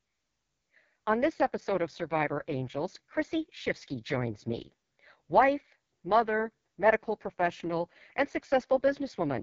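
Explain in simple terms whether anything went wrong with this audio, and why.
Yes. Throughout the recording the speech goes through the AMR wideband (HD Voice) codec at what sounds like its lowest setting, so voices turn rough and raspy. Unlike an ordinary phone call, the sound still reaches about 6.9 kHz, keeping some airy brightness.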